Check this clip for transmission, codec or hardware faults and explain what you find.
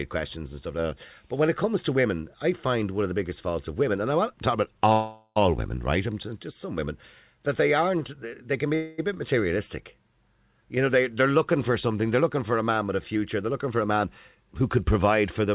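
Two kinds of fault show up here, on a speech clip whose band stops at 4 kHz, which fits a narrowband G.711 mu-law call path.

Call audio freeze: at 4.92 to 5.41 s and again at 8.75 to 9.00 s, the sound stretches into a fading buzz. Late packets likely drained the jitter buffer. Speech resumes intact, just pushed back by roughly 0.44 s and 0.23 s.

Jitter buffer speed-up: from 13.16 s to the end, the buffer trims tiny pitch-period slices, about a fifth of a second in total, so speech runs about 8% fast at unchanged pitch and sounds a bit rushed.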